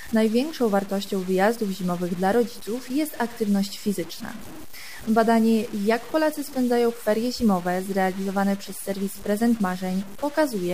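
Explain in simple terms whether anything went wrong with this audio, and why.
Something did go wrong. From the very start to the end, about 11 seconds, the sound has a grainy, gritty roughness that shifts as the sound changes, strongest in the quieter moments, where it turns coarse or breaks up. The likely cause is low bit depth without dither: the audio seems to have been stored with only about 6 bits, with values simply chopped off. That leaves a harsh error riding close beneath the sound itself.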